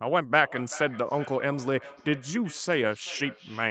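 A speech recording in which, from 0.39 s to the end, each phrase returns as a fainter, thinner, ringing copy roughly every 0.4 seconds, the loudest repeat sitting about 16 dB below the direct speech, all within a call band that stops at 8 kHz. This is feedback echo between two devices: one device in the room plays the other's outgoing audio, that microphone captures it again, and neither echo canceller removes sound played by the other device.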